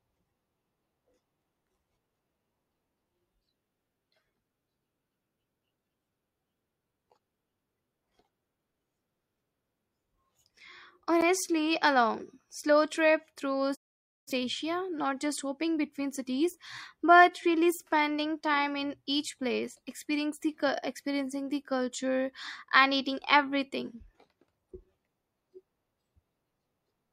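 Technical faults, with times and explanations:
11.21 s, block of digital silence. The speech drops to silence for about 10.7 ms, then returns. There is no fade at either edge, so the waveform jumps straight to silence and back. Being shorter than about 15 ms, the gap is heard as a tick or dip rather than as silence. A gap this length fits a 512-sample buffer. The program most likely failed to fill the output buffer in time, so zeros were played instead.
13.74 to 14.32 s, digital broadcast dropout. The speech fades out over about 20 ms and stays silent for roughly half a second. It then resumes. The receiver lost the digital signal, or the incoming frames failed their checks, so it muted the output rather than play corrupt data. About 0.51 s of programme is missing, and it is not recovered. The short fade softens the cut into a hole rather than a click.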